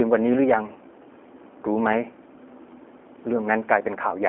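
Speech that sounds boxed-in and audibly synthetic throughout, with a slight roughness. The low end thins out below about 250 Hz, and nothing survives above about 3.7 kHz, so the sibilants are dull. This is G.729 codec damage, and the sound fits its 8 kbit/s rate. The codec rebuilds speech from a vocal-tract filter, a pitch predictor and a few coded pulses per short frame, so the fine detail is lost and replaced by a modelled, slightly artificial texture.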